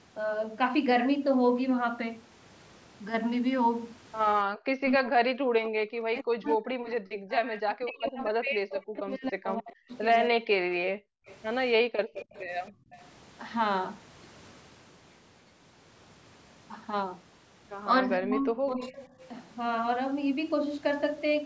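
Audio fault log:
4.46–10.39 s and 18.17–18.93 s, speech suppressed in double talk: while both ends talked, the talker dips by roughly 40 dB and later about 20 dB, likely the canceller ducking everything. The waveform shows collapsed envelopes.
10.83–12.15 s and 12.71–12.93 s, background gated by the echo canceller: the room sound drops out abruptly, by about 40 dB and then about 25 dB, and returns on release. The spectrogram shows dark vertical gaps in the noise floor.
11.26–11.38 s, 12.20–12.98 s and 18.94–19.08 s, echo leak: faint copies arrive 269 ms after the speech, about 20 to 25 dB down, likely residual loudspeaker pickup. The spectrogram shows a delayed, weaker repeat of the speech patterns.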